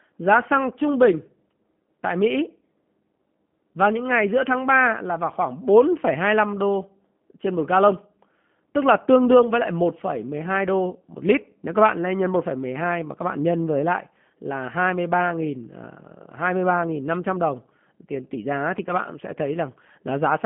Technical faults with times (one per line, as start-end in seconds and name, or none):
0.00-20.46 G.729 codec